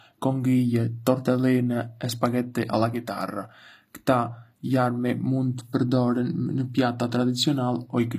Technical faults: HE-AAC compression

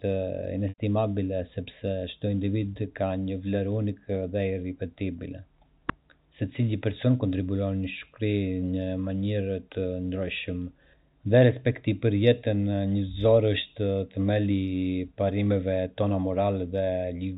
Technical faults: packet loss with pitch repetition

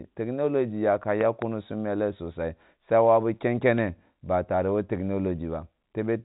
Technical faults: loud pop

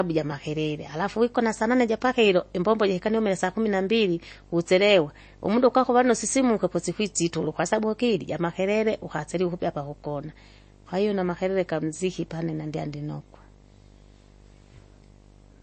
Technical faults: video or display buzz; MP3 compression

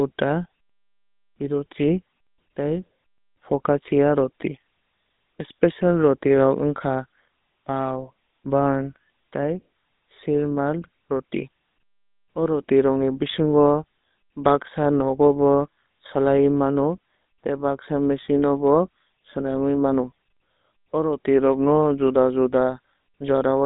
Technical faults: GSM full-rate codec

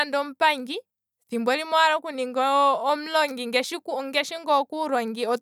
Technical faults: none

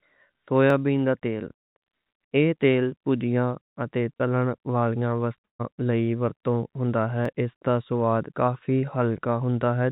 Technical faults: dropped samples; short concealed packet loss; burst of packet loss

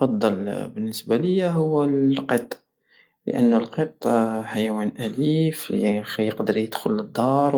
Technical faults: none

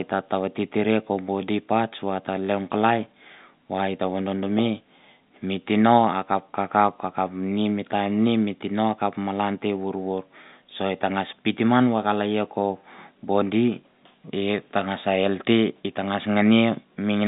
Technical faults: none

